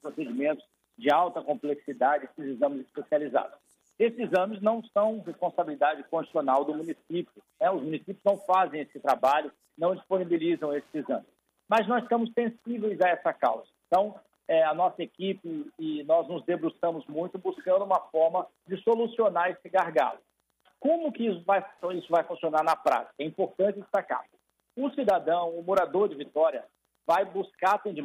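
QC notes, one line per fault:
Throughout: Wi-Fi interference, a faint regular ticking near 10 per second, about 45 dB below the sound, from a nearby radio's beacon repeating every 102.4 ms and being rectified in the circuit. Unlike the denser 217 Hz buzz of GSM, these ticks stay separately audible.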